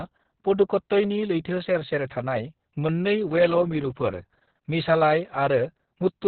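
Opus voice compression runs through the whole clip, with heavy damage. Nothing is heard above about 4.3 kHz, the narrowband limit, so the speech sounds muffled and phone-like. The coarse, low-detail texture fits Opus working in its SILK linear-prediction mode at a very low bitrate, around 6 kbps. The codec models each stretch of speech with a simple filter and rough excitation, which leaves the voice hoarse and faintly robotic throughout.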